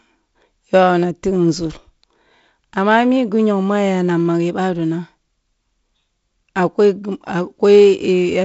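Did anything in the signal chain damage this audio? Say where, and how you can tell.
No, the speech has passed through a G.722 wideband telephone path at 48 kbit/s, so its content stops at about 7.7 kHz and it carries only the light coding texture expected at that rate, with no stage in the chain doing anything beyond that.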